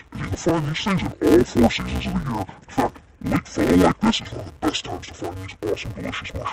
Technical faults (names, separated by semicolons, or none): interleaved audio read as planar